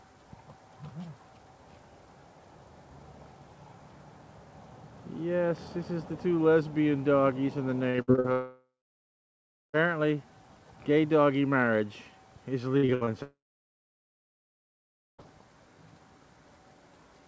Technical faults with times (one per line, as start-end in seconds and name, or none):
7.90-8.26 repeated packet loss (robotic sound)
8.32-9.75 long network dropout
12.77-13.09 repeated packet loss (robotic sound)
13.23-15.20 long network dropout